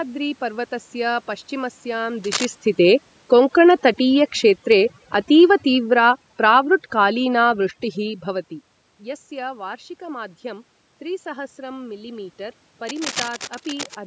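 Overdone noise removal runs through the whole recording. The suppressor was set so hard that it pulls individual frequency bands down to nothing whenever they sit near its noise estimate, so the room background collapses into near silence sprinkled with twinkling specks. The quieter components of the speech get cut along with the noise. Unlike a plain low level or a dull filter, the damage flickers band by band from moment to moment.

From 2.24 to 2.46 s comes a short burst of cable scratch noise, dense and uneven, a little below the level of the speech. A second, longer burst from 12.84 to 13.97 s reaches about the same level as the speech. Both sound like scratching or rustling laid over the audio, likely from a worn cable, connector or control being moved so that its contact resistance jumps around. Dropouts or clicks would instead be isolated gaps or single ticks, not this granular texture.

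Between 2.73 and 7.63 s, automatic gain falling sets in. The gain control judged the input too loud or its background too noisy and brought its level down gradually, by about 8 dB in total, so speech and background sink together. That shared, steady slide is what separates it from the talker moving around 2 s and 8 s, where only the voice changes level against the room.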